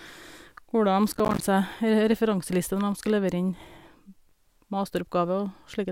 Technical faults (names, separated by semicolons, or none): processor overload crackle